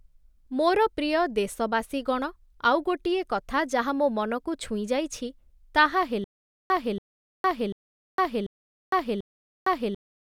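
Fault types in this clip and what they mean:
Stutter with silent gaps: from 6.24 s to the end, the same 282 ms burst of speech repeats five times, each followed by about 459 ms of digital silence, at an even 741 ms pace. That silence sets it apart from a seamless loop, and it is likely a stalled player retrying.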